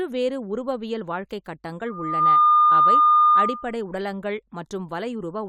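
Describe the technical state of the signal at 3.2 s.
At 3.2 s a steady, piercing squeal at 1.2 kHz sits roughly 15 dB above the speech. It swells up within about 0.4 s and lasts from 1.86 to 3.75 s. This is loudspeaker feedback squeal: the microphone picks up its own loudspeaker, and at that one frequency the loop gain exceeds unity, so the tone keeps reinforcing itself.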